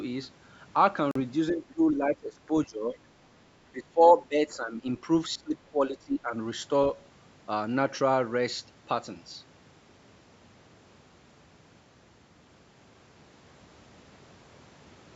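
At 1.11 to 1.20 s the audio cuts to silence with abrupt or briefly faded edges, a Bluetooth dropout with 42 ms missing, which fits a few lost packets. Playback resumes further along, as though the stream had kept running while the packets likely failed to reach the headphones in time.

Three stretches of speech suppressed in double talk follow, at 1.50 to 2.96 s, 3.72 to 4.85 s and 5.35 to 6.34 s. The talker dips by up to around 15 to 20 dB, in pieces totalling roughly a second in each of the first two and under a second in the third. The likely cause is an echo canceller turning down the near end while the far side talked over it.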